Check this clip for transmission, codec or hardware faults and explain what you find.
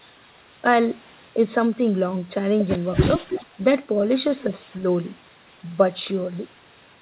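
One fault appears in this speech: an echo leak, heard three times, carried over a call path whose band stops at 4 kHz, which fits G.711 mu-law coding.

From 3.25 to 3.56 s a delayed copy of the speech trails it, only slightly quieter. Much fainter scraps follow at 4.46 to 4.50 s and 4.67 to 4.76 s. Each lags by 328 ms, likely loudspeaker pickup the echo canceller failed to remove.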